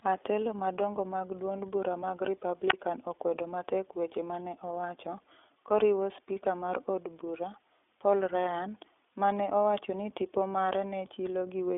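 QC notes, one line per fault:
throughout, iLBC codec: The speech passes through a narrowband VoIP codec that codes each 20 ms frame's excitation on its own, at a rate that fits iLBC's 15.2 kbps mode. The line band runs from about 300 Hz to 3.5 kHz and nothing survives above 3.8 kHz, so sibilants and brightness are gone. The frame-by-frame coding leaves a plainly audible rough, synthetic grain on the voice.
2.69 to 2.73 s, wireless microphone squelch dropout: The analogue FM microphone's radio signal faded far enough that the receiver's squelch shut the output. A brief rise of hiss marks the fade. The output then falls into a hole of near silence lasting about 29 ms, and the speech comes back once the signal recovers above the squelch threshold. The whole event is short enough to sound like a quick gap in the voice.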